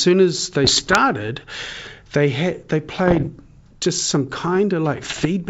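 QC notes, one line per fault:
0.64–0.99 s, 3.06–3.29 s and 4.97–5.26 s: bit errors on an ADPCM link. Pops and rough bursts come with brief level jumps. Flipped bits throw off the decoder's step size and predictor, so each error rings on for milliseconds. The middle burst is harshest.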